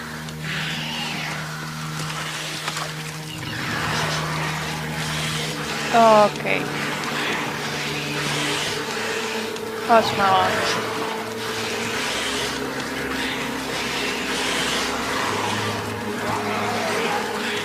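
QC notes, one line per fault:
No fault found for the QC notes.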